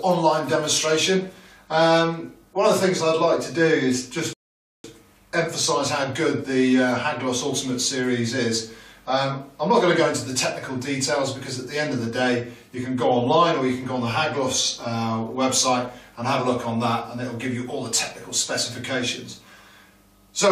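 At 4.33 s the audio stops dead and sits in silence until 4.84 s, a rebuffering stall: the player ran dry of downloaded data and waited for more, adding 0.51 s. Playback resumes exactly where it broke off, so nothing is lost. On a waveform or spectrogram this shows as a clean empty gap.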